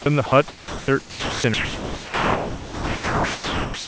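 The sender's voice detector repeatedly misjudged the speech as background and stopped sending, which is the likely cause of five dropouts: sound dropped by the voice detector at 0.02–0.06 s, 0.26–0.32 s, 0.48–0.88 s, 1.00–1.44 s, and from 1.54 s to the end. Each time the speech gives way to a steady, even comfort-noise hiss. The last gap erases everything after 1.54 s, while the room noise sits about 26 dB beneath the speech.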